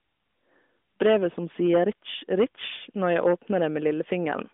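Speech, carried over a narrowband mobile path whose AMR coding passes nothing above about 3.7 kHz, with three bursts of hard clipping at 1.02 to 1.26 s, 1.63 to 1.89 s and 2.32 to 2.44 s. During each burst the level exceeds what a stage in the chain can pass, by about 9, 7 and 6 dB respectively, so the waveform peaks are sheared flat. Those squared tops add harsh upper harmonics, heard as a gritty fuzz on the loud syllables.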